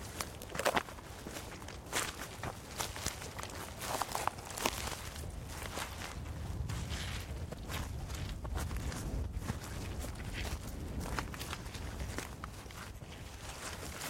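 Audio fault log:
12.91 s, repeated buffer: a block of about 1.33 ms, which fits a 64-sample buffer, plays twice because fresh audio arrived late. The hard join and the roughly 1.5 ms of missing sound make it a click or brief buzz rather than an audible stutter.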